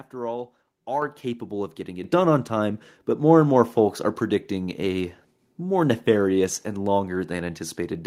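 At 1.02 s, just before "capable of getting", and again at 2.04 s, before "done on time but", the microphone volume steps up about 6 dB, lifting speech and background together.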